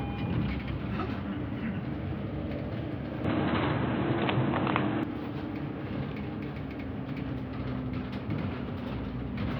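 At 3.25 s the sound goes dull and boxy with no gap, nothing above about 4.1 kHz, a level shift of roughly 5 dB and a fresh noise floor about 35 dB down, then clears at 5.03 s. The likely cause is the input switched to a poorer device.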